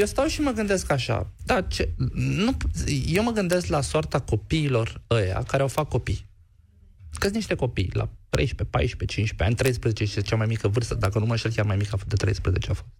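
Integer overflow cracks land at 0.01, 3.16, 3.53, 5.78, 7.22 to 7.25, 8.35, 9.66 to 9.68 and 11.05 s. Peaks hit the integer ceiling and wrapped to the opposite sign instead of being limited, so each one snaps across the full range as a harsh crack, far sharper than clipping.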